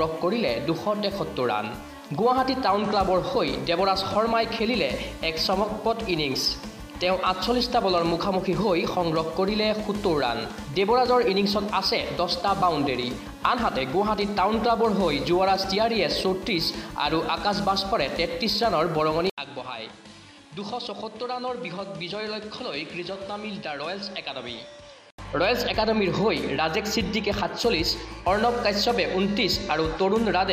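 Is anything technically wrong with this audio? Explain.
Yes. From 19.30 s to 25.18 s the sound turns duller and drops roughly 10 dB in level, with fresh background noise sitting about 30 dB below it, and nothing above 11.4 kHz. An 80 ms gap of silence marks the change at 19.30 s, and the original clarity returns at 25.18 s. This is likely an input switched to a poorer device: a different capture path with narrower bandwidth, its own gain and its own noise floor took over for those seconds.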